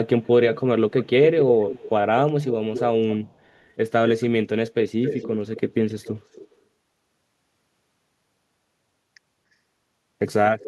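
Echo leak at 0.22–0.29 s (faint), 1.0–1.9 s, 2.41–3.58 s, 5.03–6.55 s (about 10 dB down) and 10.59 s to the end. It is a delayed copy of the speech arriving about 250–290 ms late, the delay creeping upward. The likely cause is incomplete echo cancellation on a loudspeaker end.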